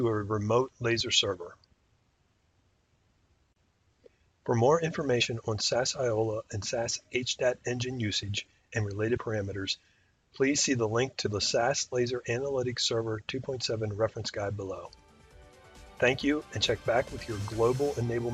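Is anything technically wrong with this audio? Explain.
Yes, the audio has two kinds of fault: short abrupt skips, and jumps where whole encoded frames were skipped.

Dropped buffer (overrun) at 1.0 s, 8.23 s and 16.79 s. Each time the sound jumps abruptly forward, losing a few milliseconds: roughly 5 ms at the first point and about 10 ms at the other two. The likely cause is that the recording software fell behind, so incoming samples were overwritten before being collected and the surviving audio was spliced end to end. Because there is no gap, each splice is heard as a jump in the sound.

Compressed frames skipped at 5.2 s, 9.16 to 9.18 s and 11.25 to 11.27 s. Here whole blocks of encoded audio were never decoded, either missing or rejected as corrupt. The playback leaps ahead by about 20 ms at 5.2 s and 11.25 s and by about 50 ms at 9.16 s.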